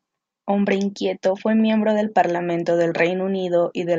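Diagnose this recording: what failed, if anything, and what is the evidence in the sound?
Nothing in the signal points to a failure at any stage between capture and playback, so there is no fault to diagnose in this speech recording.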